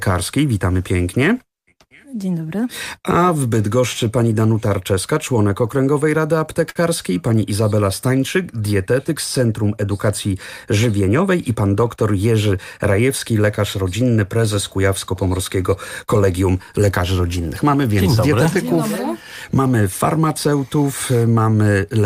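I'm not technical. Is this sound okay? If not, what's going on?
No. There are two brief problems. At about 6.69 to 6.77 seconds there is a short stall from a late packet. A piece of the audio arrived late, so the receiver held the last bit of sound for 61 milliseconds until it caught up, then carried on from the same spot. Unlike a dropout, nothing is lost. You just hear one sound dragged out a touch too long, maybe with a faint buzz or dip.

From about 11.01 to 11.57 seconds there is a jitter buffer speed-up. After falling behind, the receiver had extra audio waiting, so it trimmed tiny slivers, roughly 70 milliseconds in all, to catch up. The sound plays about 9% faster for that half-second and can feel slightly hurried. Unlike a tape running fast, the pitch stays the same. Only the pace changes.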